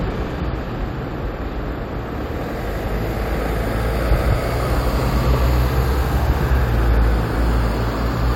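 No technical faults can be heard anywhere in this recording of sounds. Nothing interrupts or alters the audio at any point.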